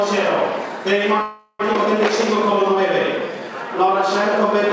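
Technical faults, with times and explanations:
1.22–1.61 s, call audio freeze: the sound stops moving forward for about 0.4 s. The last moment carries on as a fading buzz or hiss that trails into about 50 ms of silence before the audio resumes from where it left off. This is likely a stall in packet delivery that drained the jitter buffer, so the receiver had to fill the wait itself. A gap was inserted into the stream, but nothing was lost, and playback ran about 375 ms behind afterwards.
1.73 s, skip ahead: right after the freeze, playback jumps forward with almost no break, only about 10 ms of fill at the join. Roughly a fifth of a second of audio is gone, and the material on each side is spliced almost directly together. A stretch was dropped while later audio was already queued, either in transit or by the jitter buffer discarding surplus, which gives back about 200 ms of the delay the freeze had added.
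3.20–3.91 s, jitter buffer slow-down: this passage runs at about 89% speed with its pitch unchanged. Sounds are drawn out, and at times there is a slight warble. The receiver repeated single pitch periods or bits of pause again and again, adding 88 ms in total, to build up a reserve because its buffer was running low or its target delay had just been raised.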